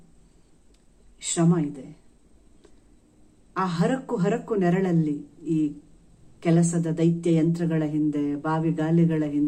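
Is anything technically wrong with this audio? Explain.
No, nothing technically wrong can be heard anywhere in this audio.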